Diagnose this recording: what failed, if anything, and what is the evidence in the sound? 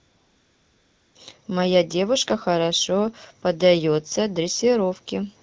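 The fault is AMR comfort noise, at the codec's discontinuous-transmission stage. From 0.0 to 1.15 s the background is a smooth, steady hiss, not real room sound. The phone judged the talker silent and stopped sending speech frames. The receiver synthesised noise from a coarse level-and-spectrum description instead.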